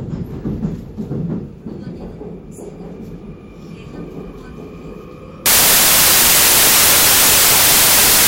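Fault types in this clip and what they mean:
Samples built from the wrong bytes: the reader assembles each sample from mismatched bytes, so rapidly changing low-order bits land in the high-order position. From 5.46 s to the end at 8.28 s, the sound turns into loud, harsh broadband noise.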